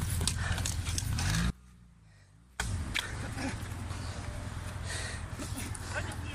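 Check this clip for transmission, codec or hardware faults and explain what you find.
One fault shows up, an audio dropout to a faint residue from 1.50 to 2.60 s. For about 1.1 s the wanted signal likely stopped arriving at the input, while everything after the break stayed live and kept passing whatever trickled through. The sound cuts off abruptly and leaves only a faint leak roughly 25 dB below its normal level, then snaps back just as suddenly. The hard edges at both ends set it apart from a natural pause or fade.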